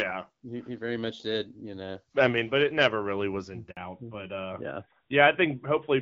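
At 3.71 s, just after "never really was in", a handover gap cuts the speech. The sound fades within a few tens of milliseconds and stays silent for 60 ms, until 3.77 s. This is the signature of a call being moved between networks. No speech frames arrived while the link switched over. Whatever was said in that window is gone for good.

From 3.77 s to the end, the call shows a fallback to narrowband. Up to that point the audio carries energy well above 4 kHz, with the light coding damage expected of HD Voice at about 12.65 kbit/s. After the switch, nothing sits above 4 kHz. The speech turns duller and rougher. That points to a drop from wideband coding to an older narrowband codec running at about 12.2 kbit/s.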